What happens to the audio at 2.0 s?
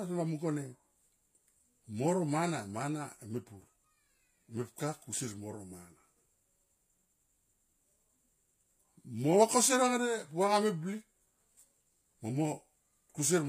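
At 2.0 s the speech carries the same degradation heard across the whole clip, likely HE-AAC compression. The treble is rebuilt from copied lower bands rather than coded, so s sounds turn gritty and metallic, nothing sits above 15.4 kHz, and the damage fits a bitrate near 24 kbps.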